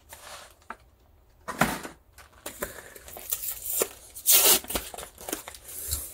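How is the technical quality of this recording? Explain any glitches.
The recording is compromised by one fault, a mains buzz. From 2.23 s to the end, a steady, raspy buzz sits well below the main sound, roughly 40 dB down. It comes from sharp switching spikes at twice the 60 Hz mains rate, whose harmonics stack up into the kilohertz range.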